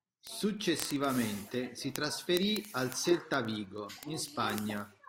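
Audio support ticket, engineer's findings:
Word clock ticks through the speech, 0.11 to 5.08 s. Sharp ticks every 30 ms or so. Unlocked digital receiver clock, roughly 700 ppm off, slipping one sample per tick.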